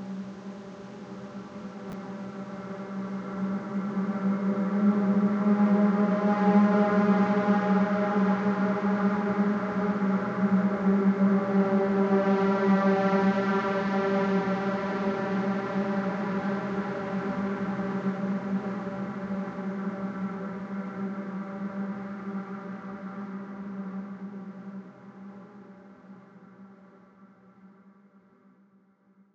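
A recording of everyday sounds with chunks out of order at 1.90–1.93 s: a 10 ms chunk plays two chunks late, causing a jumbled moment with three hard joins visible as waveform discontinuities and vertical spectrogram lines.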